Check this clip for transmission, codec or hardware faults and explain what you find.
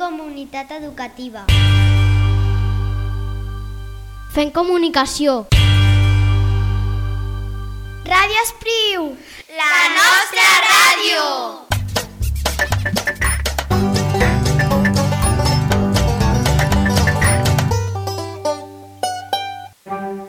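Nothing in this clip points to a transmission or hardware problem.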